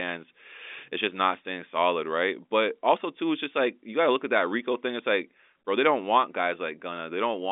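No technical faults can be heard in the speech, which carries the narrow band of ordinary G.711 telephone coding, running from about 250 Hz to 3.6 kHz with nothing above roughly 3.7 kHz.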